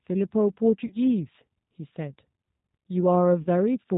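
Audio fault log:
throughout: G.729 codec. The speech has passed through a low-rate CELP coder, which fits G.729A at 8 kbit/s. It keeps only a vocal tract filter, a pitch predictor and a few pulses per 10 ms frame, and nothing above 4 kHz survives. The result is plainly audible: the speech is band-limited and muffled at the top, with a rough, slightly synthetic buzz where the coarse pulse excitation stands in for the real waveform.
0.87–0.94 s and 3.42–3.48 s: VoIP packet loss concealed by the speech codec. At each point about 30 ms of audio never arrived, consistent with a single lost packet. The decoder filled the gap by repeating its last pitch and filter settings at falling gain, so each gap is a brief stretched sound that fades. Because every frame builds on the one before, the speech stays weak or distorted for a short time after each gap.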